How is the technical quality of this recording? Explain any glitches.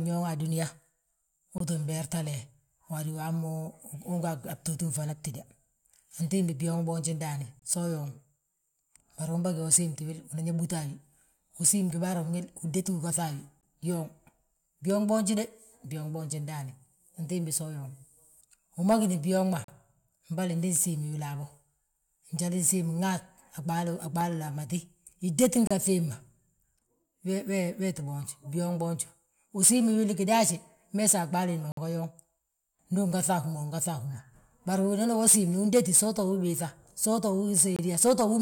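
The recording has two kinds of glitch: repeated short dropouts and one pop.

Gaps between stream segments occur at 1.58, 7.59, 13.61, 19.64, 25.67, 31.72 and 37.76 s. They repeat every 6 s, which points to 6-second stream segments. Timestamps leave a hole between segments, and the player fills it with silence. Each is a hard-edged break of 18 to 53 ms in the speech. No speech is lost.

A loud pop appears at 24.21 s. It is a single sharp click, lasting about 20 ms and peaking a few decibels above the speech. It is likely a sudden voltage step or pulse, such as static or a switch, added to the signal. The speech continues underneath.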